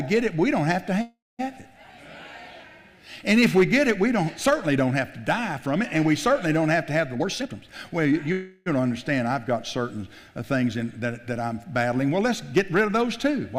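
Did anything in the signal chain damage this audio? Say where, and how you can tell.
Yes, at the network and jitter-buffer stage. A call audio freeze occurs at 1.01–1.41 s: the last sound is held as a fading buzz or hiss, falling silent for its final 0.21 s. Another runs 8.32–8.68 s without silence. These are likely late packets emptying the buffer. Nothing is lost, but each freeze adds delay.

A jitter buffer speed-up runs from 7.14 to 8.27 s. The sound plays at 127% speed with unchanged pitch and feels rushed. The receiver trimmed short pitch-period slices repeatedly to shed about 0.3 s of excess buffered delay.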